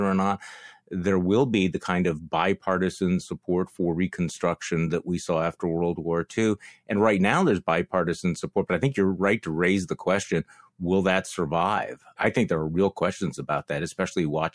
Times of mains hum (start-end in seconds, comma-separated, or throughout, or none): none